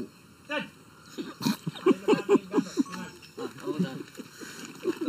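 Throughout the clip, one channel runs late by about 0.7 ms before the two are summed to mono, causing channel delay (comb filtering). Shared content cancels near 700 Hz and at evenly spaced points above, leaving a hollow, phasey sound.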